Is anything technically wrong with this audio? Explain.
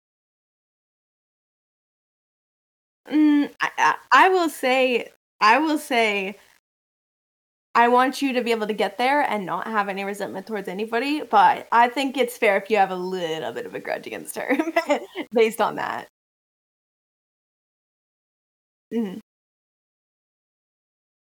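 Yes. Low bit depth without dither runs through the whole speech clip. The quiet passages sound gritty and grainy, and the roughness shifts as the speech changes. The softest moments break into sputter or drop out to silence. The error sits roughly 40 dB below the signal. That points to about 9 bits. The cause is likely rounding to that depth with no dither. Without dither, the rounding error tracks the waveform instead of spreading into steady hiss.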